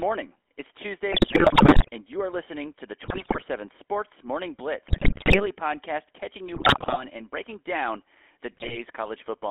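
The whole clip runs through the GSM full-rate codec. The speech sits in a narrow band of roughly 250 Hz to 3.5 kHz, with the buzzy, gravelly edge you get when the codec builds the voice from a vocal-tract model driven by sparse pulses. That fits the 13 kbps full-rate coder.

On top of that come GSM bit errors from corrupted frames reaching the decoder: 1.12 to 1.89 s, just before "and you are listening"; 3.04 to 3.43 s, right after "are listening to the"; 4.88 to 5.46 s, before "podcast catching"; 6.54 to 7.04 s; and 8.52 to 8.78 s. Garbled filter, pitch and gain values turn the voice into squawks, pops and gargling in each burst.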